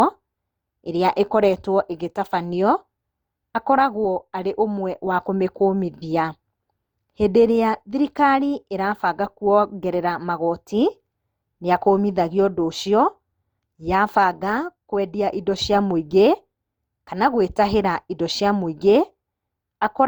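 Throughout, the speech sounds swirly, smeared and hollow, with blurred attacks. This is likely generation loss from about five passes through an Opus encoder around 64 kbit/s.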